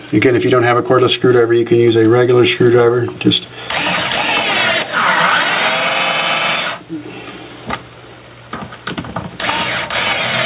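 Gain pumping runs through the whole clip: the gain swings by around 15 dB, leaving levels squashed together. This is likely from input gain set far too high with a fast limiter clamping it. Everything stops at 4 kHz, which fits a narrowband telephone codec.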